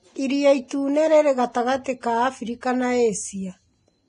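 From start to finish the speech sits under heavy Vorbis compression damage, likely from encoding at a low bitrate, consistent with roughly 28 kbps. Nothing survives above 10.6 kHz, and the treble below that cut-off turns grainy and hissy, with sibilants smeared into noise and consonant attacks blurred. A plain low-pass filter would sound dull but clean, whereas here the coarse quantisation swaps fine high-frequency detail for rough noise of similar energy.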